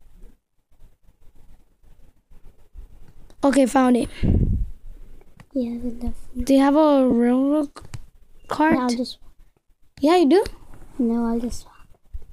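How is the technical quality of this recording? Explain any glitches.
Two brief glitches are audible, both lost LE Audio frames, at 7.11–7.13 s and 8.72–8.75 s, gaps of 15 and 22.5 ms that fit runs of 7.5 ms frames. The LC3 decoder concealed each gap by repeating the previous spectrum with randomised phase signs, so tonal content briefly turns into a short noisy smear.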